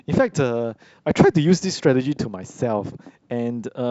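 No technical faults are audible.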